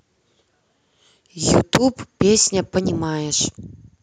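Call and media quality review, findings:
Microphone overload, 1.54–1.77 s: input gain likely set too high, driving peaks about 8 dB past converter full scale; tops of around one percent of samples flattened, giving a harsh, crackling edge on the loudest speech.

Microphone volume stepped down, 2.79 s: likely automatic gain control in call software cutting device input in a single step; speech and background drop together by about 4 dB, an abrupt audible level change.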